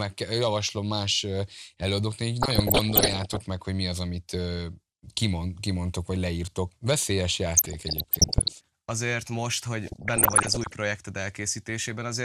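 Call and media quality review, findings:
DAB burbling in speech, 2.41–3.41 s, 7.52–8.52 s and 9.85–10.74 s. Worst at 2.41 s, where residual bit errors run around one to two percent. Lighter at 7.52 s, under one percent. Component: DAB receiver, MP2 decoder. Weak reception lets bit errors slip past error correction. Corrupted samples put short noise blips in single sub-bands; corrupted scale factors make sub-bands jump in level. Each burst fits roughly forty damaged audio frames.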